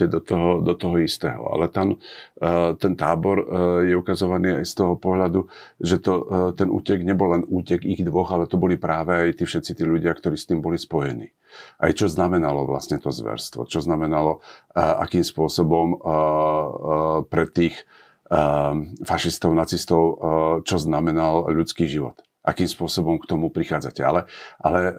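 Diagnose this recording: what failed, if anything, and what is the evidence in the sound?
Nothing failed: the recording shows no fault at any stage, and the sound gives no evidence of one.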